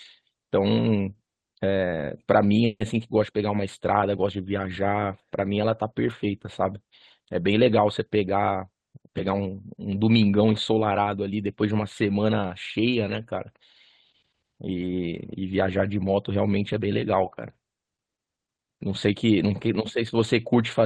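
Call audio freeze at 2.65 to 2.83 s: the speech stops moving forward and the last sound is stretched out for about 150 ms, followed by roughly 40 ms of silence, before the audio picks up exactly where it left off. Nothing is lost, but a gap is inserted that pushes the rest of the clip 150 ms later. This is likely a stall in packet delivery that left the jitter buffer empty, so the receiver had to fill the wait.

Jitter buffer speed-up from 16.58 to 17.50 s: the speech runs at about 105% speed without any change in pitch, just enough to sound hurried. The receiver was holding more audio than its target, so it repeatedly cut out short pieces of one or a few pitch periods, removing about 50 ms in total to bring the delay back down. This happens on a call path that uses the Opus codec, with audio reaching up to about 12 kHz.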